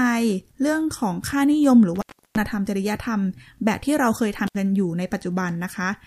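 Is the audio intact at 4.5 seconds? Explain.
No. An intermittent contact, a loose connection briefly opening, drops the speech for about 67 ms between 4.47 and 4.55 s, with crackle at each edge.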